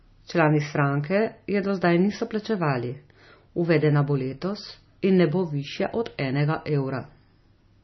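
A speech recording with heavy MP3 compression damage throughout: the voice sounds watery and swirly, with patchy, flickering blocks in the upper bands. This likely comes from MP3 encoding at a very low bitrate, around 25 kbps. There are also two sharp clicks from dropped samples, at 3.78 s just before "bo letos" and at 5.17 s just before "ne bo". Each shows as a thin vertical line on the spectrogram and a small step in the waveform, likely where only a couple of samples went missing.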